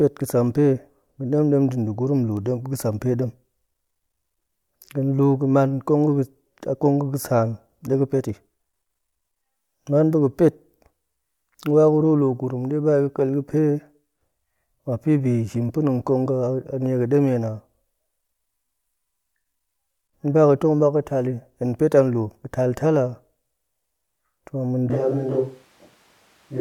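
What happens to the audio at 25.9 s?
A switch to a distant microphone runs from 24.9 s to the end: the speech turns roomy and thin with little level change, likely because the close microphone dropped out.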